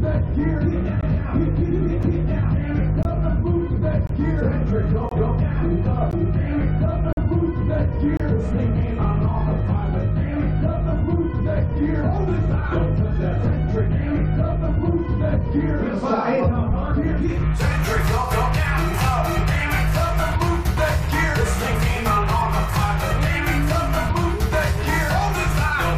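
Gaps between stream segments cut the sound at 1.01, 2.03, 3.03–3.05, 4.07–4.09, 5.09–5.12, 6.11, 7.13–7.17 and 8.17–8.20 s. At each of these boundaries between one-second segments, the timestamps leave a hole that the player fills with hard-edged silence lasting 3 to 46 ms. No audio is lost.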